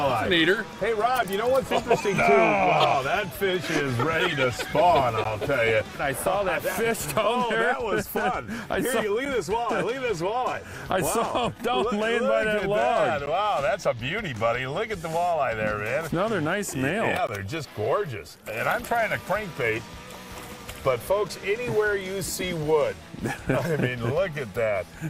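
Hard-edged silent holes of roughly 5 to 16 ms at 5.24, 9.25, 13.26, 17.27 and 21.29 s mark a gap between stream segments. Their regular 4-second spacing points to segment boundaries, and unlike a dropout, no sound is lost.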